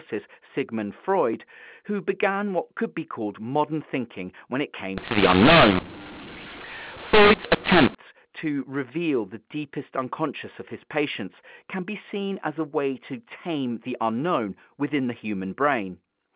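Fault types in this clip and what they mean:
mu-law and A-law mixed up: From 4.97 to 7.95 s, the A-law telephone stream appears to have been decoded with the mu-law curve. The two logarithmic scales map codes to levels differently, so sample values come out wrongly sized, some too loud and others too soft, and the quietest ones rise well above silence. The speech turns harsh and distorted, and pauses fill with noise, set against the band-limited telephone sound on either side.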